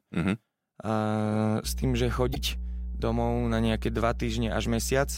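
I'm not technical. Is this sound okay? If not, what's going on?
No. From about 1.63 seconds to the end, there is mains hum. Electricity from the power line is leaking into the recording, most likely through a ground loop, where equipment plugged into different outlets forms an unwanted electrical path, or through a nearby transformer. You hear it as a steady, low buzzing tone at 60 Hz underneath the speech. It is fairly loud, close to the level of the speech itself, so it is easy to notice.

There is also damaged data in a compressed stream from 2.31 to 2.37 seconds. Part of the compressed file was corrupted, so the player could not read that stretch properly. It lost its place and had to search ahead for the next piece it could understand. That brief confusion comes out as a short chirp or blip, and the audio may skip forward at that point.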